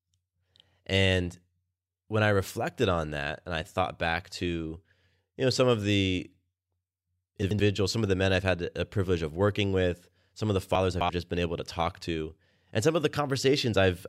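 At 7.42 to 7.60 s, just before "some of the men", chunks play out of order: an 85.33 ms piece of audio arrives one chunk late and sounds after its successor, giving a brief jumbled stutter. At 10.75 to 11.09 s, between "with some of the" and "just been able to", a chunk lands three chunks late, so the scramble runs longer. Unlike a dropout, no audio is missing; it is only reordered.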